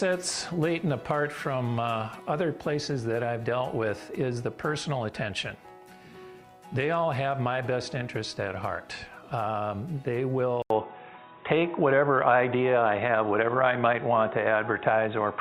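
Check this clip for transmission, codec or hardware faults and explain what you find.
One fault is present. At 10.62 s the sound cuts out for 80 ms, then returns dull and boxy until the end. Nothing above 3.8 kHz remains. The level shifts by about 5 dB, and a faint new background noise appears. The input was likely switched to a poorer device, with a narrower band and its own tone and noise.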